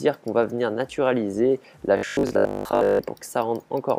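From 1.97 to 3.03 s the audio collapses into robotic sound from repeated short buffers: a rigid, metallic buzz at 50 Hz that only roughly tracks the underlying sound. The likely cause is audio arriving too seldom, so a roughly 20 ms chunk is replayed to fill the gap while most of the real audio, around 70 percent, is skipped. A waveform shows near-identical 20 ms cycles repeating; a spectrogram shows evenly spaced vertical striations and a dense 50 Hz harmonic comb.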